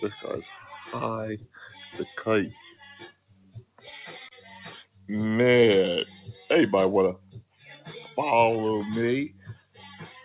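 A noise suppressor built for speech stays active across the whole clip and treats sustained sound as noise. The level swings by roughly 10 dB, so held tones and tails pump and thin. On a waveform, the envelope breathes, and on a spectrogram, steady bands fade between attacks. The band ends near 4 kHz, consistent with a G.711 A-law call path.

The suppressor also cuts particular sounds at 1.41 to 1.59 s, 2.53 to 3.82 s, 4.85 to 5.09 s, 7.17 to 7.59 s and 9.3 to 9.78 s, with drops of about 15 to 16 dB. Sustained or decaying material sinks abruptly. The waveform shows sudden dips, and the spectrogram shows those stretches going dark.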